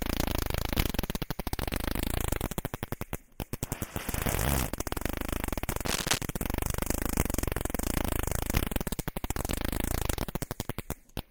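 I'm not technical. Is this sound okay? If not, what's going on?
No. From 5.86 to 6.18 seconds, a burst of scratchy, rustling noise sits on top of the sound, about as loud as the sound itself. This is cable scratch noise. A worn cable or plug being moved is the likely cause.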